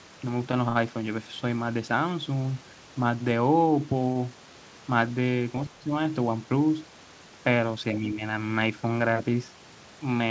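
A speech recording carried over a call link, with its spectrum ending at 8 kHz as a wideband codec such as G.722 would leave it, shows two short stalls from a late packet, at 0.69 to 0.79 s and 4.12 to 4.19 s. Each time the next packet was overdue, the receiver's buffer ran dry and the last sound was stretched, by about 68 ms and then about 31 ms, before playback resumed where it had stopped, so nothing is lost. On a spectrogram the harmonics run flat and smeared for that span. The waveform shows a repeating, slightly buzzy stretch. Later the speech dips, most likely speech suppressed in double talk, at 5.70 to 5.90 s and 7.95 to 8.20 s. With both ends active, the echo canceller pulled the talker down along with the echo. The first dip is roughly 10 dB deep and the second roughly 5 dB. On the waveform these appear as a pinched envelope.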